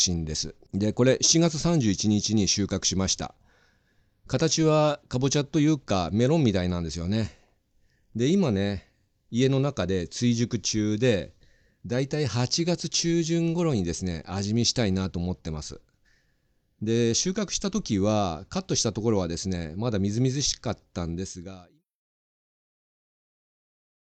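No technical faults can be heard in the speech. Near the end the level eases down in a smooth fade out, starting around 21 s and finishing at 21.85 s with no click or hard edge.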